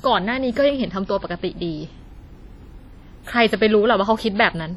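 Speech, heavily compressed throughout, with ringing, washy smearing and hiss that breathes with the voice, likely WMA compression at a rate fitting about 32 kbps; nothing above 20.1 kHz.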